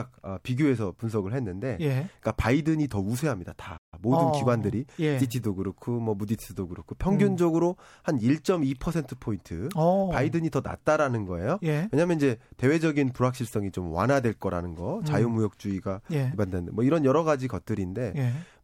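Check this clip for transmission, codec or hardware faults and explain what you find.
Two related playback faults occur close together, both in the first six seconds of this speech.

Playback stall, 3.77 to 3.94 s: the player likely ran dry of buffered data, so output cut to silence for about 147 ms mid-flow.

Time-compressed catch-up, 3.94 to 5.40 s: the player trimmed its backlog by splicing out short slices, so speech runs 1.1 times faster at unchanged pitch.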